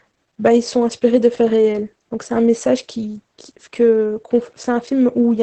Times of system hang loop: none

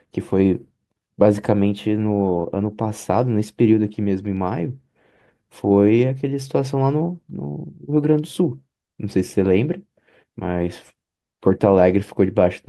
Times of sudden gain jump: none

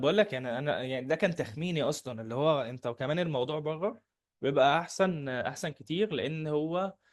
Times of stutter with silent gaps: none

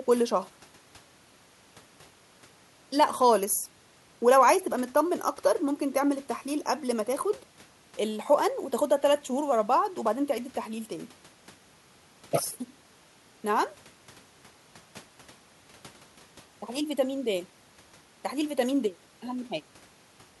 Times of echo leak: none

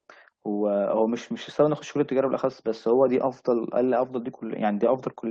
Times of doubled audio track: none

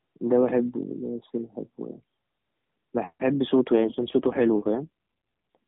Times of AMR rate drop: 3.78-5.57

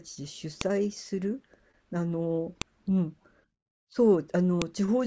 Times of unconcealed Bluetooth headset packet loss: none

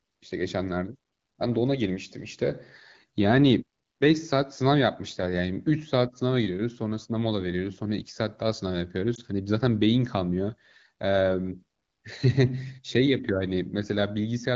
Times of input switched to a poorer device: none

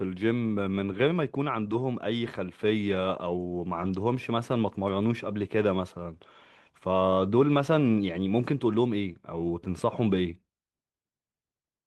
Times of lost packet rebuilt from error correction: 1.71-1.73, 3.81-3.87

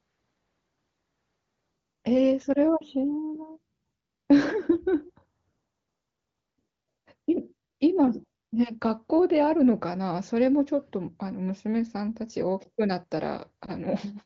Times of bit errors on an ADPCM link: none

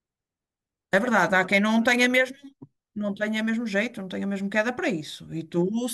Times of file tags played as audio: none

